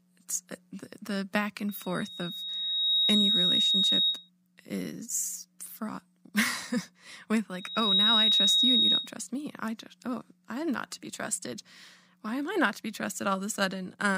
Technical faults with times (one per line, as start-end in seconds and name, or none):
1.68-4.30 loudspeaker feedback squeal
7.54-9.13 loudspeaker feedback squeal